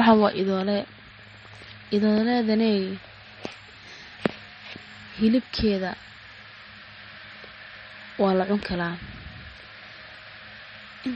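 From start to end, the speech sounds watery and swirly. The treble is dull and cut off. S sounds carry metallic chirps, and onsets smear. The likely cause is heavy MP3 compression, which fits a low bitrate near 32 kbps. Weak frequency lines drop in and out between frames.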